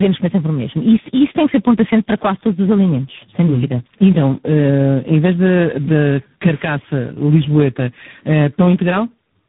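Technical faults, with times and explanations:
Throughout, tandem speech coding: the speech sounds like it was decoded and re-encoded across four speech codecs in a row, likely iLBC, CVSD, AMR-NB and G.726 joined by G.711 links, each coding the last one's damage, and nothing survives above 3.8 kHz.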